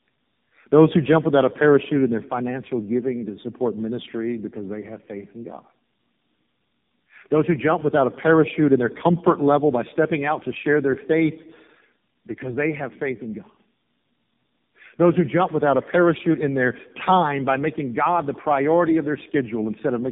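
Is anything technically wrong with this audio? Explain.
Yes. Throughout the speech there is tandem speech coding. Several narrowband codecs in a row, which fits repeated AMR-NB stages, each re-code the last one's errors. The result sounds rough, muffled and warbly. A spectrogram shows a hard ceiling at 3.6 kHz and smeared harmonics.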